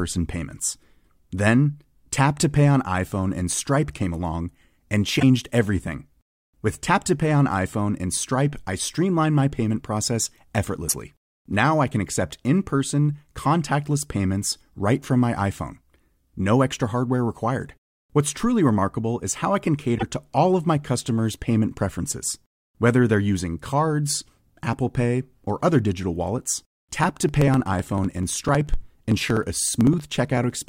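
Speech, with two kinds of fault. Around 5.19–5.23 s, 10.88–10.95 s and 19.97–20.03 s the audio jumps ahead and the next 40–65 ms come out garbled, which points to a likely broken MP3 bit reservoir, with frames dropped and the following 26.1 ms frames decoding borrowed bytes from the wrong place. A spectrogram shows each as a brief disturbance breaking the harmonic pattern. From 26.47 s to 30.63 s, periodic USB or driver dropouts skip roughly 1 ms every 0.063 s, about 70 times, heard as a steady ticking under the voice. The waveform shows evenly spaced discontinuities, and the spectrogram shows a comb of thin vertical lines.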